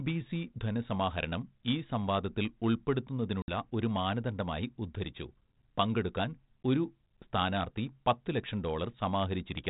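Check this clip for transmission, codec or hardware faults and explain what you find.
One transmission fault stands out in the speech, carried over 32 kbit/s G.726 ADPCM with only light coding roughness. Between 3.42 and 3.49 s there is packet loss on an ADPCM call: a hard-edged silent hole of about 60 ms, a few packets' worth. The decoder's adaptive predictor and step size lose track of the sender's, so "ഒരു മാനദണ്ഡമായി ഉദ്ധരിച്ചു പങ്കെടുക്കാൻ" returns briefly distorted before resettling. A plain dropout would resume cleanly.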